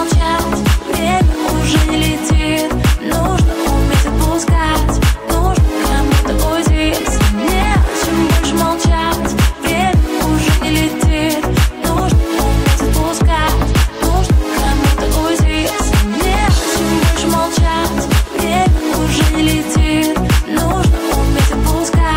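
At 7.00 to 7.05 s, about 45 ms of lost LE Audio frames (consistent with six 7.5 ms frames) is concealed by the decoder repeating the last spectrum with scrambled phase, so tones smear into a brief noisy hiss; a spectrogram shows harmonics blurring into noisy texture. A single-frame loss at 14.66 s leaves a brief noisy smear.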